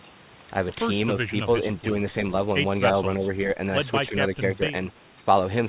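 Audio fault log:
1.27–1.36 s, 4.09–4.18 s and 4.39–4.61 s, speech suppressed in double talk: The voice briefly dips by around 5 dB, each time for about a tenth of a second or less. The likely cause is an echo canceller that met simultaneous talk from the far side and turned everything down.
5.04–5.12 s, echo leak: A very faint delayed copy of the voice appears, far below the speech, trailing it by 337 ms. It likely comes from a loudspeaker at the far end whose echo canceller let some pickup through, which was sent back.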